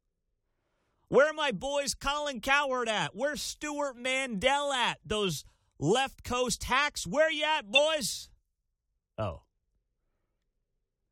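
At 7.74 to 7.79 s, just after "you at", the speech lurches forward, as if a sliver of sound has gone missing. These are compressed frames skipped: about 20 ms of audio was never played because those frames were missing from the file or rejected by the decoder as damaged.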